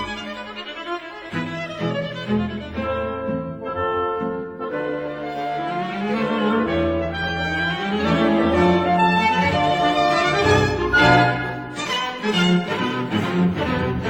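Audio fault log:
Nothing to log for this clip. A careful listen turns up no fault at any point in the audio.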